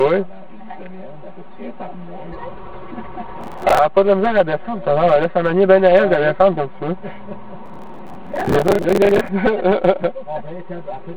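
From the start the whole clip carries channel delay (comb filtering): one channel trails the other by about 5 ms, so the mono sum cancels at evenly spaced frequencies. The first notch sits near 100 Hz, giving a hollow, phasey tone. A spectrogram shows regularly spaced dark horizontal stripes.

From 3.41 to 3.79 s, and again for longer from 7.66 to 9.29 s, processor overload crackle appears. About 20 and then about 70 buffer deadlines are missed, and stale audio is replayed with hard edges. The spacing suggests buffers of roughly 10 ms. It sounds like gritty tearing riding on the sound. The waveform shows repeated discontinuities, and the spectrogram shows broadband vertical streaks.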